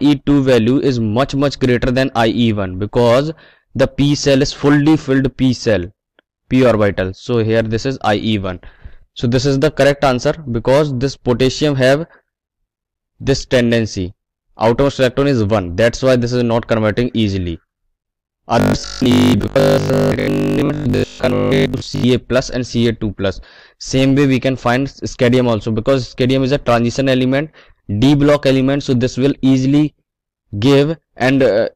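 From 18.60 to 22.06 s the sound collapses into a rigid, metallic buzz at 50 Hz: robotic sound from repeated short buffers. The likely cause is audio arriving too slowly, so playback loops the most recent slice, about 20 ms given that buzz rate, while most of the real material in this stretch is skipped. On a waveform the span shows near-identical 20 ms cycles tiled end to end; a spectrogram shows evenly spaced harmonic lines at multiples of 50 Hz.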